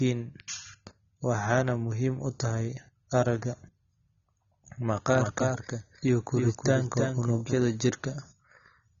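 From start to finish the speech is dull and bandlimited, with nothing above 7 kHz and plainly audible smearing and a warbling, fizzy edge on sustained sounds and sibilants. This is most likely AAC compression at a low bitrate, consistent with AAC-LC at around 24 kbps. The encoder lowered its cut-off and quantised the remaining bands coarsely. A plain low-pass filter would dull the sound but leave no swirling texture. Here the artefacts move with the signal.

From 5.09 s to 7.53 s a doubled audio track appears. A second full-band copy of the speech trails the original by about a third of a second and is about 5 dB quieter. It starts and stops abruptly at those times. The likely cause is the same audio being captured again through a slower path, or an edit that left two unaligned copies. Unlike an acoustic echo or reverb, the copy has no decay, no room colouring and no repeats, just one clean duplicate.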